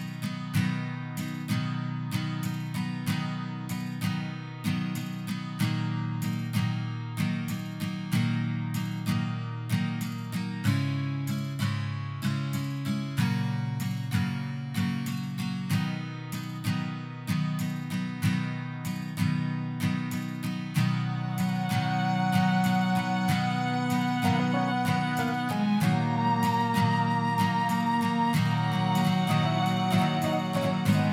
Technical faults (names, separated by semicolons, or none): doubled audio track